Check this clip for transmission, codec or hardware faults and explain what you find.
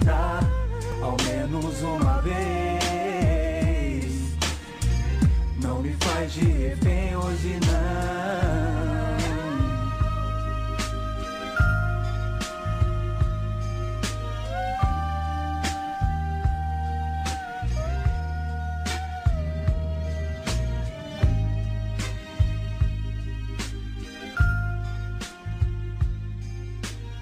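One fault: a brief tick at 0.92 s. It is a block of digital silence about 2.9 ms long, consistent with a 128-sample buffer left unfilled and zeroed, with abrupt edges.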